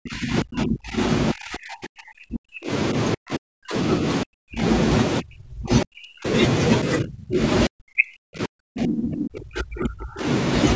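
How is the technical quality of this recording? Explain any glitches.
The technical quality is poor: the talker's level repeatedly collapses. The speech ducks deeply, by about 35 to 40 dB at its worst, and drops out in pieces at 0.0–0.99 s, 1.33–2.71 s, 3.15–3.75 s, 4.24–4.64 s, 5.2–6.27 s, 6.83–7.4 s and 7.67–10.26 s, the last being the longest. This is likely speech suppressed in double talk. While both ends spoke at once, the echo canceller couldn't separate the near talker from loudspeaker echo and attenuated everything together. The audio's bandwidth tops out at 8 kHz, as expected from call microphone processing.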